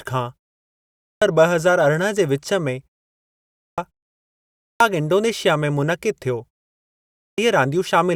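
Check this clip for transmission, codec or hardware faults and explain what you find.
Four times in this speech clip, the sound after a pause is cut off at the start: at 0.65 to 1.22 s, at 3.19 to 3.78 s just after "जे विचु में", at 4.2 to 4.8 s just before "इंडोनेशिया में", and at 6.8 to 7.38 s. This is a clipped start after a pause. Speech bursts abruptly out of silence with its opening missing, about 0.57 to 0.60 s swallowed each time after pauses of roughly 0.35 to 0.4 s. The output device sleeps during the gap and needs that long to wake and lock before sound passes again. The pauses go fully silent and the device does not recover in time, so speech is lost.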